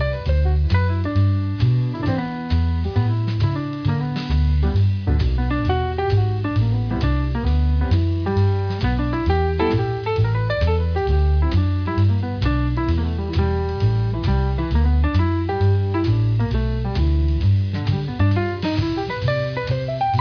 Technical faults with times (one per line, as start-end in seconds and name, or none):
0.00-20.21 aliasing